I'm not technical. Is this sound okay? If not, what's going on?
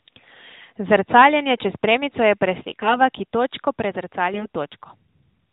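No. From about 2.68 to 2.97 s the voice turns hoarse, scratchy and gargly for a moment. Its pitch and loudness stay roughly the same. These are AMR bit errors. On a weak mobile link, some of the less important bits in the compressed phone audio arrived flipped, roughly one in twenty. The phone's decoder still accepted the data and rebuilt the voice from partly wrong pitch, level and tone details. The whole clip has the narrow, muffled quality of an ordinary mobile call.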